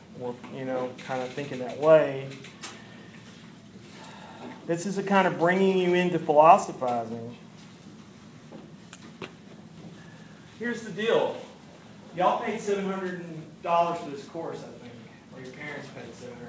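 No technical faults can be heard in this audio. It has passed through a working WebRTC call path, and the band stops at 8 kHz, which fits a G.722 wideband codec running at around 64 kbps.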